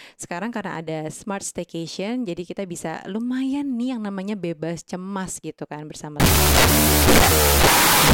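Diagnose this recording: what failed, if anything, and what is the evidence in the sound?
Wrong sample width from 6.20 s, just after "cemas gitu kan bersama", to the end at 8.13 s: a sample-format conversion fault. The 16-bit speech is read as unsigned 8-bit, so mismatched bytes form loud noise over a buried voice at half speed, an octave low.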